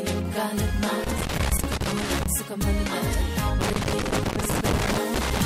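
Loose connector crackle breaks in from 1.04 to 2.26 s and again from 3.61 to 5.41 s: a worn contact making and breaking chops the signal into irregular scratchy bursts, seen as ragged dropouts and spikes in the waveform and scattered broadband vertical streaks on a spectrogram.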